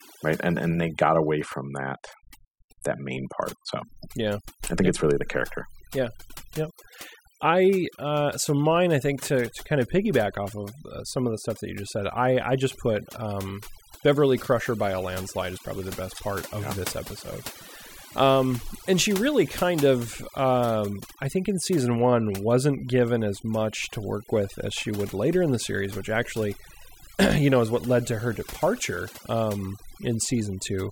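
A speech recording suffers from overdone noise removal across its whole length. Pauses collapse to near silence dotted with twinkling specks, and quiet parts of the voice are pulled down with the noise. A noise gate would instead cut everything together.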